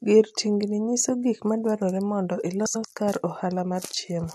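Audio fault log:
2.66–2.85 s frames out of order: two adjacent 93 ms blocks play swapped, a garbled flutter; unlike a dropout, no sound goes missing.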